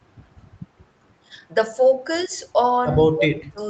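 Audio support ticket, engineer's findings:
Speech suppressed in double talk, 2.27–2.34 s and 3.1–3.58 s: level dips about 10 dB briefly, then about 25 dB for roughly 0.4 s. Likely echo canceller unable to separate near talker from loudspeaker echo during overlap, attenuating both.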